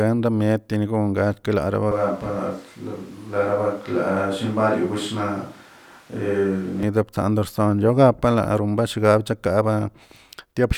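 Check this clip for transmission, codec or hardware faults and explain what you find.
One fault is present. A switch to a distant microphone runs from 1.91 to 6.83 s, starting right after "teringon kal". The close microphone's feed likely dropped out, leaving a farther pickup. The speech turns suddenly roomy and hollow, thinner in the bass, about 5 dB quieter, with background noise roughly 30 dB below the speech, then snaps back.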